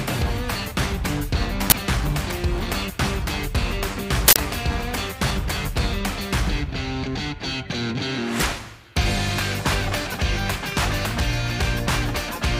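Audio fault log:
1.70–1.72 s and 4.28–4.36 s, uninitialised buffer: twice the playback path sent out a block before any audio had been written into it, so the leftover values in that memory were played as samples. The first event is a sudden, loud crack and the second a burst of digital noise, both with no relation to the surrounding sound. The first lasts 20 ms and the second 80 ms, matching the block length, and each stops as abruptly as it begins.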